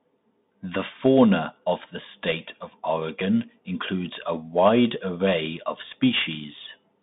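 Speech, carried throughout over a Bluetooth CVSD headset codec. The band runs from about 150 Hz to 3.7 kHz with nothing above 3.8 kHz, and the codec damage is plainly audible: a one-bit up/down delta coder, consistent with 64 kbps, cannot keep pace with steep waveforms. S sounds turn scratchy, loud high content distorts, and granular hiss sits under the speech. An ordinary narrowband telephone line shares the band limit but stays clean inside it.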